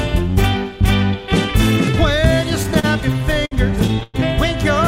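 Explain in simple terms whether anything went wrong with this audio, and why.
Something did go wrong between 2.63 and 4.16 s: repeated stalls, a stutter. The incoming audio kept arriving late, so playback ran dry eleven times and filled each pause by holding the last sound, the longest pause about 106 ms. Nothing's missing, but it drags and hiccups.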